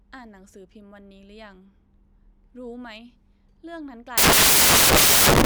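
A speech recording that, from 4.18 s to its end at 5.46 s, collapses into loud, harsh broadband noise: samples built from the wrong bytes. The decoder is assembling each sample from misaligned or swapped bytes, so the rapidly varying low-order bits land in the high-order position and dominate the value. Unlike hiss or distortion, the noise is loud and broadband.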